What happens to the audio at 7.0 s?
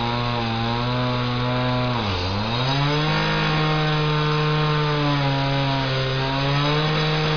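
At 7.0 s the sound carries on intact, with no dropout, click or other fault at that moment.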